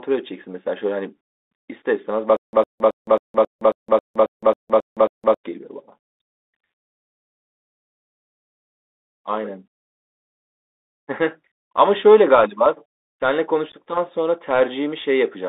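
Bluetooth CVSD headset codec, throughout the speech: the one-bit delta coding, which fits a 64 kbps CVSD link, confines sound to roughly 250 Hz to 3.7 kHz, adding granular hiss, scratchy sibilants and distorted loud peaks.

Unconcealed Bluetooth headset packet loss at 1.82 s: a 7.5 ms hole, consistent with about one lost packet, was filled with nothing, leaving an abrupt dropout with hard edges.

Stutter with silent gaps from 2.37 to 5.34 s: a 105 ms fragment repeats eleven times, each followed by 166 ms of digital silence, every 271 ms. The likely cause is a stalled player retrying its last buffer while the intended audio is lost.

Unconcealed Bluetooth headset packet loss at 13.72 s: a 15 ms gap, pointing to about two consecutive lost packets, cuts the speech abruptly, and the sound returns momentarily quieter on the CVSD link.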